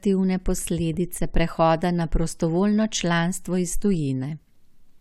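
At 3.94 s there is a DC step. The waveform's zero line jumps suddenly, by about -35 dBFS. A 20 Hz high-pass then pulls the offset back toward zero. The jump is heard as a brief low thump under the speech, which carries on unchanged.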